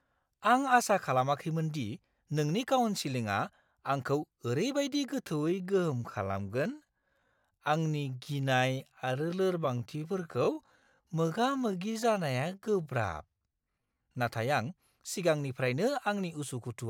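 It's a speech clip, and from 5.20 s to 14.14 s there's a time-stretched section: the pace suddenly drops to about 0.7x while the pitch holds steady, leaving things dragging. That's likely software stretching the audio to fit a length by repeating short pieces.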